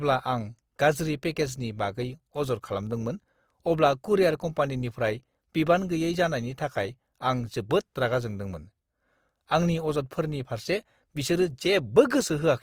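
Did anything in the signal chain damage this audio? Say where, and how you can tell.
Yes. The damage sits at the codec stage and runs through the whole clip. The speech sounds grainy and rough, with noisy texture where tones should be clean, but the top end stays open. That points to Opus compression, likely in its music mode at a low bitrate near 24 kbps, filling starved bands with noise.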